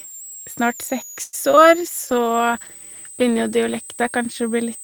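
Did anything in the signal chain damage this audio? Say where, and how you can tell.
Yes. In the analogue power and wiring stage, a switching power supply whistle runs through the whole recording. A supply operating in an audible burst mode, or beating against another supply, leaks into the signal as a thin tone wandering between 6.78 and 8.56 kHz, centred around 7 kHz. It sits roughly 20 dB below the speech, and its pitch shifts as the supply's load changes.

At the network and jitter buffer stage, there is a short stall from a late packet from 1.23 to 1.35 s. A packet arrived late, the buffer ran dry, and the receiver held the last sound for 96 ms until the packet turned up, then resumed from the same point. Nothing is lost, but the speech hangs unnaturally long, and the playout delay grows by 96 ms.

Right after that come two short concealed packet losses, at 1.51 to 1.54 s and 1.56 to 1.59 s. 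Audio went missing entirely, 20 ms and then 40 ms, and the receiver papered over it with only 8 and 11 ms of extrapolated sound before rejoining the real stream. The second shortfall trims the delay by roughly 30 ms. You hear it as a quick smear or wobble, and brief consonants can drop out.

In the codec stage, a call bitrate drop sets in at 1.79 s and lasts to the end. The bandwidth estimate collapsed and the Opus encoder fell from 64 to 15 kbps, staying at its lowest for about 2.0 s. With so few bits the coding coarsens and the upper frequencies are cut away, so the speech turns muffled, rough and watery.

Back in the jitter buffer, a slow-down runs from 2.07 to 2.25 s. To rebuild its reserve, the receiver repeated individual pitch periods and slivers of pause, adding 40 ms. Playback drops to 82% speed with the pitch unchanged, so sounds stretch out.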